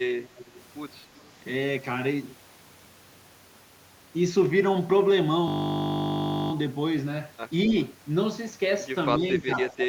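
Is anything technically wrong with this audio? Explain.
Yes. From 0.27 to 0.50 s and again from 1.16 to 1.20 s there is echo leak: a far-end echo canceller likely let loudspeaker pickup through, returning a faint copy of the speech about 230 ms late, roughly 20 dB down, then much weaker.

From 9.13 s to the end, the speech is suppressed in double talk, likely because the echo canceller mistook simultaneous talk for echo. For about half a second the speech dips by up to around 15 dB.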